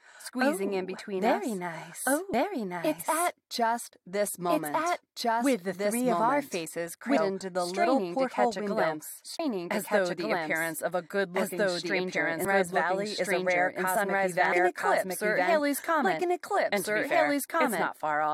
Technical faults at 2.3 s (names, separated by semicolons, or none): doubled audio track; damaged data in a compressed stream